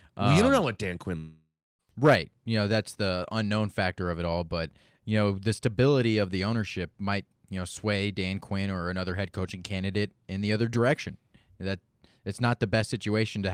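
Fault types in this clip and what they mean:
Long network dropout: between 1.17 s and 1.81 s the speech breaks off, and the last sound is drawn out into a buzzy tail that fades away, leaving about 310 ms of silence before the speech resumes. About 620 ms of speech never comes back; playback continues from a later point with that stretch lost. The likely cause is an interruption in packet delivery, with the receiver's concealment covering the gap until it ran out.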